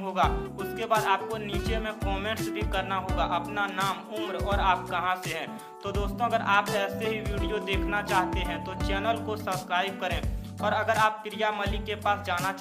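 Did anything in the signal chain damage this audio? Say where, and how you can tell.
No, no signal-chain damage heard.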